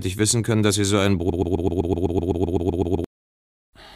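A broken-record loop runs from 1.3 s to 3.04 s: a 127 ms fragment repeats 14 times, likely from a stalled player or stream, replacing the intended audio.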